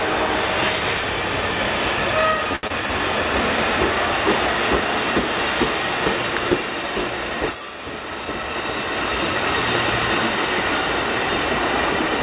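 A jitter buffer slow-down runs from 2.45 to 2.88 s: the receiver repeats tiny pitch periods to rebuild its reserve, adding 41 ms, so the sound plays at 93% speed, drawn out at unchanged pitch. Inside it, a short stall from a late packet at 2.56 to 2.65 s holds the last sound for 73 ms until the overdue packet arrives, giving a sustained patch with a slight buzz or dip and nothing lost. Right after, a short concealed packet loss at 2.67 to 2.72 s drops 40 ms; the receiver bridges the gap with 26 ms of continued sound, heard as a brief smear or wobble. A loud pop at 6.37 s sits about 15 dB above the surrounding sound, a single sharp click over audio that continues underneath, likely from a plug, switch or static discharge. Another loud pop at 9.75 s repeats that single sharp click at about the same level. Throughout, the call path carries nothing above 4 kHz, which fits a 64 kbps G.711 A-law codec.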